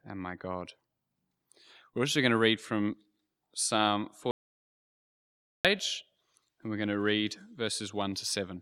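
At 4.31 s the speech just stops dead and doesn't come back until 5.65 s, an audio dropout to silence lasting about 1.34 s. The gap is silent with no room tone, likely the input link dropping while recording carried on. Whatever was said there is gone.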